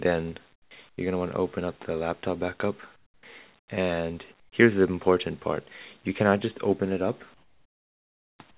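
Discontinuous transmission in a call chain, likely triggered when the sender's voice detector judged the pauses silent, replaced the real background with comfort noise at 0.53–0.71 s, 0.89–0.98 s, 2.96–3.23 s, 3.59–3.68 s, 4.40–4.52 s and 7.34–8.39 s. In those gaps the quiet background, already about 36 to 42 dB below the loudest parts, gives way to a flat, characterless hiss that sits about 10 to 17 dB lower still. Each gap is heard as a sudden dip into smooth, synthetic quiet, the last one lasting about a second. At 3.20 s the same detector, probably reacting too slowly, produces an onset clipped by the voice detector. Roughly the first 30 ms of returning sound went unsent and was filled with comfort noise, so the sound starts hard, with no soft attack. Across the whole clip the band stops at 4 kHz, which fits a G.711 mu-law path at 64 kbps.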